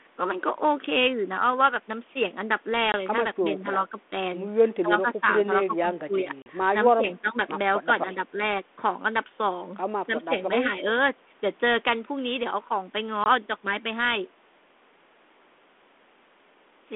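At 2.92 s the speech drops into a 20 ms hole, a single lost packet on the ADPCM call: the gap is filled with silence, so its edges are hard, and the speech returns slightly distorted until the decoder's predictor and step size re-align. The same happens at 6.42 s, with a 40 ms hole that fits two lost packets, and at 13.24 s, with another 20 ms hole. This 32 kbit/s G.726 line passes roughly 250 Hz to 3.5 kHz.

From 3.49 s the speech dips repeatedly, likely speech suppressed in double talk. The echo canceller turns the near talker down along with the far side while both talk at once. The dips fall at 3.49 to 4.12 s, 4.82 to 5.26 s, 5.66 to 6.29 s, 6.94 to 7.37 s, 7.85 to 8.39 s and 10.06 to 10.33 s. They range from about 5 dB to about 15 dB. Unlike the packet-loss holes, these are softened dips, not silent gaps.

At 5.09 s, inside a suppressed stretch, an echo leak is likely. A faint copy of the speech arrives 281 ms late, about 25 dB below it, for roughly 50 ms. 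It is added sound rather than missing sound, which separates it from both the holes and the dips.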